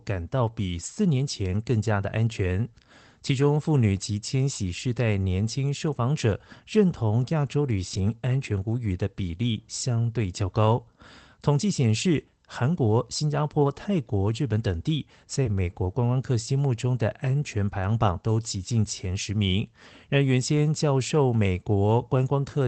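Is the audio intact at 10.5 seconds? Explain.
Yes, the speech at 10.5 seconds is intact, with no dropout, glitch or other fault at that moment.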